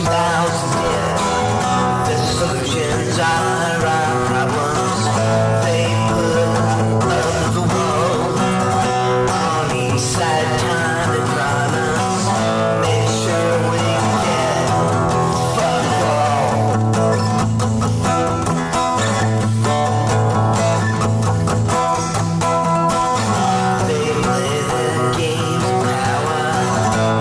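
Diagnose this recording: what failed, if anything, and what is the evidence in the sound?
No stage of the chain, from capture through conversion, processing and transmission to playback, shows any audible sign of failure in this recording.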